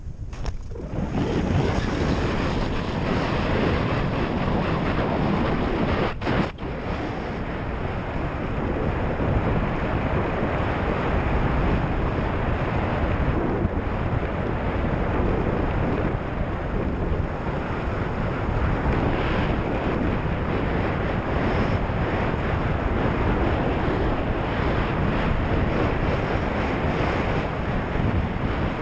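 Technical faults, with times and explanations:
Nothing here counts as a fault; the sound comes across a call connection whose band stops at about 8 kHz, which fits a wideband codec such as G.722.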